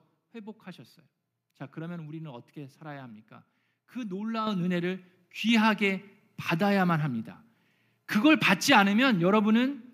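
At 4.47 s the microphone volume stepped up: the call software judged the input too quiet and raised the device's capture gain in a single jump of about 8 dB. The speech and the background noise behind it suddenly get louder together.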